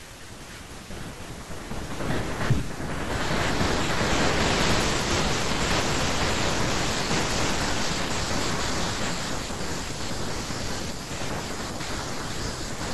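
No technical faults are audible.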